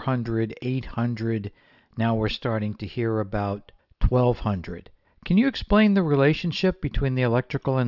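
No technical faults are audible.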